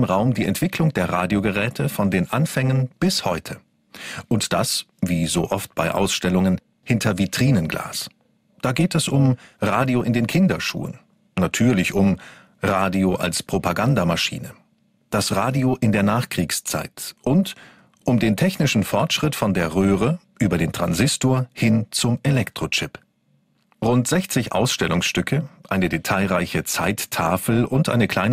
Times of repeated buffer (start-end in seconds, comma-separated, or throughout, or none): none